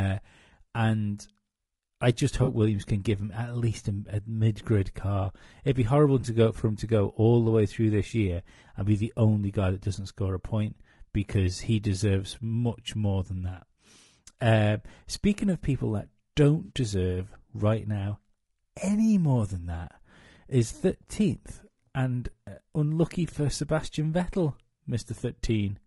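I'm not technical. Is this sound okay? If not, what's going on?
No. Throughout the clip there is what sounds like low-delay AAC compression: the speech is rough and grainy, with a hiss-like fizz between the tones and a thin, artificial-sounding top end. The likely cause is a video-call codec that encodes sound in very short slices, which capture voice pitch poorly.

There is also AAC frame loss with concealment at 2.43 to 2.48 s, 6.21 to 6.24 s and 16.65 to 16.71 s. Short chunks of about 40, 20 and 40 ms went missing, and the player patched each gap by guessing, leaving a brief smeared, noisy blip.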